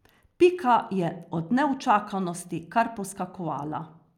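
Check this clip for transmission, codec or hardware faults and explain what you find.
The speech signal comes through continuous and stable, with nothing audible that points to a fault anywhere in the chain.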